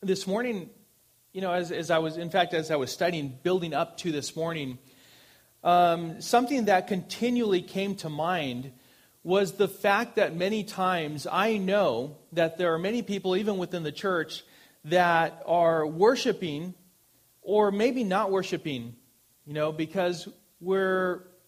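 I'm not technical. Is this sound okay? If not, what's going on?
Yes, nothing in this recording points to a technical problem with how it was captured, processed or transmitted.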